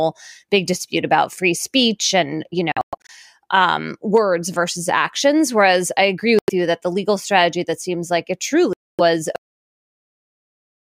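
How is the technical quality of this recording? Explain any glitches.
The recording has some real problems: three stretches of missing audio, and then it ends abruptly.

The gaps at 2.72 to 3.1 s (after "free speech and you", several holes adding up to about 230 ms), 6.39 to 6.50 s (after "I agree") and 8.73 to 9.01 s (after "that seems like it") sound like a likely Bluetooth dropout. Packets arrived too late and were discarded, so the audio cuts to silence with abrupt edges or a very short fade and picks up further along, as if it had kept playing.

At 9.36 s there's a cut-off end. The last buffers were never played, so the speech stops mid-sound and drops straight into digital silence with no natural decay. It sounds like someone pulled the plug.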